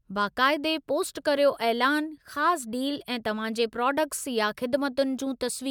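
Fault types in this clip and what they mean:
No faults present in this audio.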